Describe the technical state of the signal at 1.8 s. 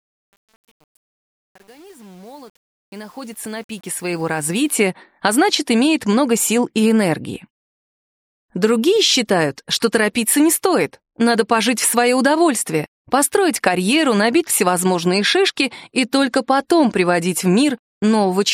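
Truncation distortion on a fade runs from 0.0 to 4.76 s, and 1.8 s falls in its worst stretch, which lasts until about 4.15 s. The fade-in is rendered with too few bits and no dither, which fits an 8-bit gain stage. Low in the ramp, the waveform collapses into a handful of coarse square steps. At 1.8 s the sound is gritty rather than rising cleanly.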